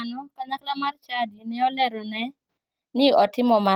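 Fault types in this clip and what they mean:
Automatic gain rising: the automatic gain control judges the incoming speech too quiet and steadily raises its gain, so the voice and the background noise grow louder together, a gradual swell starting at about 0.36 s and continuing through to 3.75 s.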